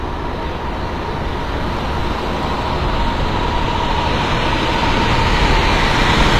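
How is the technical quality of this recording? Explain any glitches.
The technical quality is noticeably compromised, with one fault running through the whole recording. From start to finish, the upper frequencies sound bright but synthetic, with a gritty, metallic sheen on anything sharp or hissy, and nothing at all above 14.9 kHz. The likely cause is HE-AAC compression, which fits a low bitrate around 24 kbps. The codec encodes only the lower spectrum and fakes the treble by copying lower bands upward under a coarse envelope, so the rebuilt highs don't match the real harmonics.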